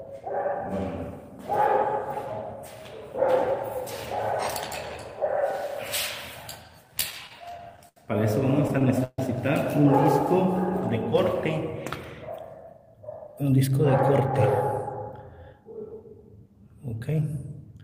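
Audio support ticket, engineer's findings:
Repeated stalls (stutter), 6.87–7.97 s and 8.62–9.19 s. Audio drags and catches. Jitter buffer repeatedly ran empty on late packets; receiver extended prior sound to bridge gaps, twelve short gaps in the first, four longer ones up to 141 ms in the second. Nothing lost.

Jitter buffer speed-up, 12.70–14.15 s. Audio runs about 7% fast, pitch unchanged, sounds hurried. Buffer overfilled; receiver trimmed short pitch-period pieces, around a tenth of a second in total, to pull latency back down.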